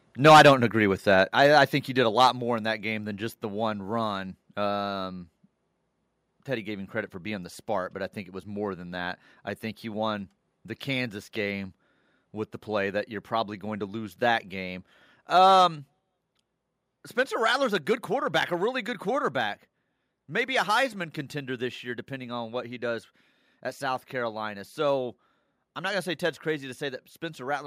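Right at the start, from 0.24 to 0.53 s, the speech is hitting a hard ceiling. That's microphone overload, likely from the input gain being set too high so the peaks run about 7 dB past the converter's limit. Around a fifth of the samples are flattened off, so you get a harsh, crackly edge on those loud syllables.

Inside that burst, at 0.29 s, there's a sudden drop of about 2 dB across both speech and background. That's the microphone volume stepped down, likely the call software reacting to the clipping by pulling the device gain in one go. It happens again, about 4 dB this time, at 1.29 s right after "agree with that".

Even so, the peaks still clip lightly, about 1 dB over, from 1.45 to 1.58 s and again from 2.21 to 2.27 s after "think he did a". That second one is followed at 2.31 s by another roughly 4 dB step down, just before "more in that game". A last 4 dB step lands at 16.0 s. 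Each of these is audible as an abrupt dip in loudness rather than a smooth fade.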